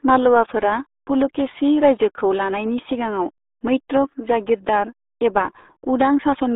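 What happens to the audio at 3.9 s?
At 3.9 s the sound has passed through the RealAudio 14.4 codec, a dial-up-era speech coder squeezing the signal into a tiny bit budget, likely around 8 kbit/s. Everything above 3.8 kHz is gone, leaving muffled, gargly speech confined to a telephone-like band throughout.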